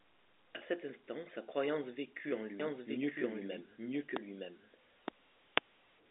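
From 2.60 to 5.12 s a doubled audio track appears: a full-band copy trails by about one second at roughly equal level, starting and stopping abruptly, likely from a second capture path.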